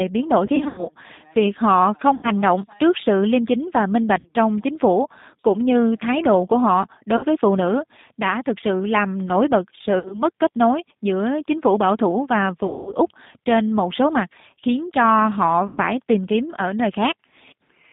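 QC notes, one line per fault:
throughout, G.729 codec: The speech is carried at 8 kbit/s, which fits G.729A. The codec rebuilds it from a filter model, a pitch predictor and a few pulses per frame, in a band of 150 Hz to 3.7 kHz. This makes the speech plainly rough, synthetic and muffled.
0.46–0.88 s, 2.15–2.31 s, 4.19–4.31 s, 7.17–7.25 s, 9.99–10.23 s, 12.67–12.93 s, 15.67–15.80 s, VoIP packet loss concealed by the speech codec: Packets were lost and the decoder filled the gaps by repeating its last pitch and filter at falling gain. This stretches the speech into a fading buzz or coloured noise. The gaps total from 60 ms up to 200 ms. The first is scattered over 320 ms, and the longest is at 12.67 s. The speech stays weak briefly after each one.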